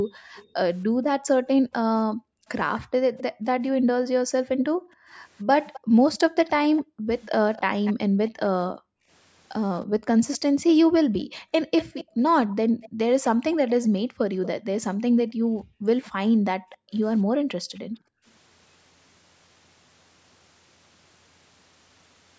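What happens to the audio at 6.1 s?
At 6.1 s two things overlap. The background is being gated by the echo canceller, which runs from the start to 18.25 s. Whenever the loudspeaker is playing, the canceller clamps the mic hard, by about 40 dB at its deepest. The room tone ducks or vanishes and comes back once it releases, adding up to roughly five seconds of dips across that stretch.

You'll also catch an echo leak between 2.79 and 14.48 s. A second copy of the talker trails the original by 235 ms, sitting roughly 20 dB below the direct speech, so it comes through as a faint ghost. The likely cause is a loudspeaker-side echo canceller that didn't fully scrub what its mic picked up and sent back down the line.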